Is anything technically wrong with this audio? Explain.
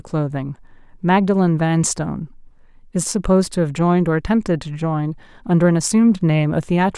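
No, nothing technically wrong can be heard in this speech recording.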